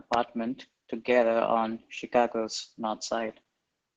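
Opus voice compression runs throughout, its SILK coder starved of bits, which fits roughly 10 kbps, leaving the speech muffled above 8 kHz, hoarse and robotic.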